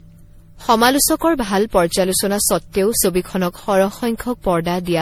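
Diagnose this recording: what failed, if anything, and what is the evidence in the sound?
Codec stage: generation loss runs through the whole speech clip, with swirly, hollow smearing and blurred attacks beyond what a single encode at this rate would give. The likely cause is repeated re-encoding, around seven passes, in a chain that fits 64 kbit/s MP3. Each pass requantises on a shifted frame grid, so the noise and spectral holes pile up.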